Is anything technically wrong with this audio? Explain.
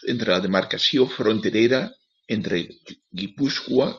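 No technical faults are audible.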